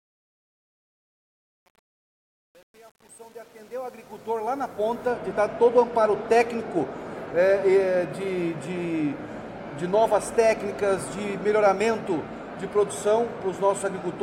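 From the start to about 5.1 s, the quiet part of the fade sounds gritty and coarse, and the grain is worst from the beginning to about 4.8 s. This is truncation distortion on a fade. A digital level stage kept too few bits and added no dither, which fits an 8-bit stage. As the signal neared the smallest step, the waveform was forced into a few square steps, and that is the roughness you hear.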